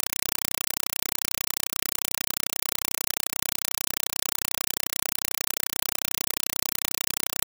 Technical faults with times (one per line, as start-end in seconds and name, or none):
0.00-7.47 compressed stream played as audio